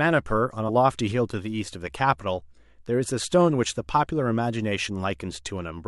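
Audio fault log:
0.68–0.70 s, damaged data in a compressed stream: there's a quick blip right near the start of the clip, about 20 ms long. What's happening is that a bit of the compressed data got mangled, so the decoder couldn't make sense of the frame it landed on. It spits out garbage for a moment, loses its place, then hunts for the next valid frame header and picks up from there, which is why it's so short.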